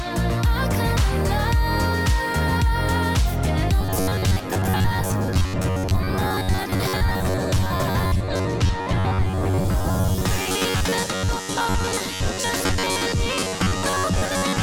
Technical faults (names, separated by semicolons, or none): robotic sound from repeated short buffers